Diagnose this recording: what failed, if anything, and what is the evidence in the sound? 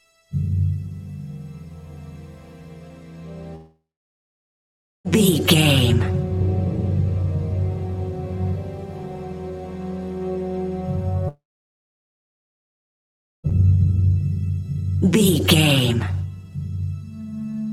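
Audio stops from 3.55 to 5.07 s and from 11.28 to 13.46 s. A fading tail gives way to silence. This is likely a long network dropout, and the lost audio is skipped.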